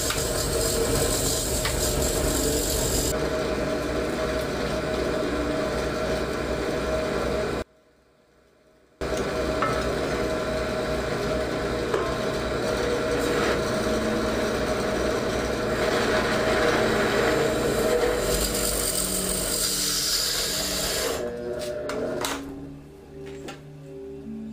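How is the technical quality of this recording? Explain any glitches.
The recording has one clear glitch. From 7.62 to 9.01 s the sound nearly vanishes, dropping about 32 dB. The likely cause is one channel inverted. When both channels are summed, their shared content cancels. Only a faint residue of their differences remains.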